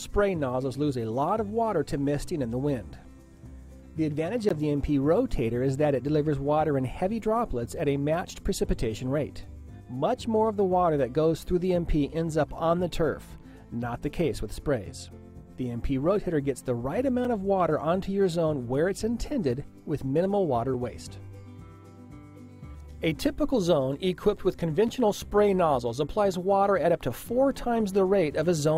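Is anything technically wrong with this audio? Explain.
Yes. Sharp ticks at 4.49, 17.25, 20.74 and 24.88 s, the first a brief 15 ms hole and the others 3 to 5 ms, are a block of digital silence. Short runs of audio drop out to silence and back with no fade, so the sound cuts out and back abruptly.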